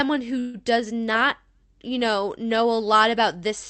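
At 0.39 s the speech stalls and a short buzzy tail stands in for it until 0.57 s. This is a call audio freeze. Packets were likely held up in transit, so the jitter buffer ran dry. The receiver stretched the last sound to fill about 146 ms. It never drops to silence. When the speech resumes, it picks up where it stopped, now running about 146 ms late. Nothing seems lost. Through the call path, the high end stops near 8 kHz.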